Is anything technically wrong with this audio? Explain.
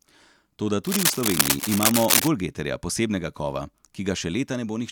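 Yes. Cable scratch noise runs from 0.84 s to 2.28 s. This burst is likely caused by a worn cable, connector or control being moved, so its contact resistance jumps about from moment to moment and injects noise into the signal. For nearly a second and a half, dense, irregular crackling and rustling sits over the speech at roughly the same loudness as the speech itself. It sounds like scratching laid over the sound.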